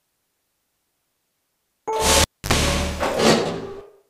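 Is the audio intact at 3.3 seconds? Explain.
Yes, the sound is intact at 3.3 seconds, with no dropout, click, distortion or other fault at that moment.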